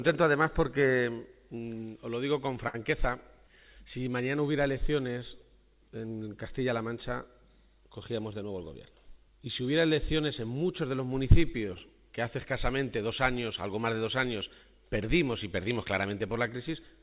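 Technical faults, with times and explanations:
2.68 to 2.76 s, short stall from a late packet. A packet arrived late and the jitter buffer ran dry. The receiver stretched the last sound for about 56 ms to cover the gap. It then resumed from the same point, so nothing is lost. The held sound lingers a moment too long, with a faint buzz or dip. Playback now runs about 56 ms later than before.
8.43 to 8.88 s, jitter buffer speed-up. The buffer was holding more audio than its target. To cut the extra delay, the receiver removed short pitch-period pieces, many in a row. Roughly 70 ms was taken out over this stretch. The audio plays at about 112 percent speed, and the pitch stays the same. The passage sounds hurried.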